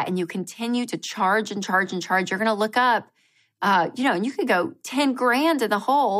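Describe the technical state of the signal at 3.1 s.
At 3.1 s the signal is intact, with no dropout, distortion or other fault audible at that point in the speech.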